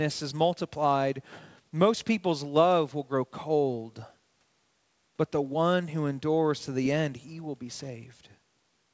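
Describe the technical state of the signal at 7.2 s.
At 7.2 s the speech is intact, with nothing there beyond the normal band limit of the call path, which leaves no content above 8 kHz.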